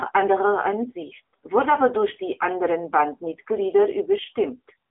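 AMR narrowband mobile codec damage runs through the whole recording. The speech has been squeezed into a telephone band of roughly 250 Hz to 3.5 kHz, with nothing at all above 3.7 kHz. The codec rebuilds the voice from a vocal-tract model fed by sparse pulses, and at this low a rate, which fits the 7.4 kbps AMR-NB mode, the result is plainly buzzy and synthetic, with a muffled, boxy tone.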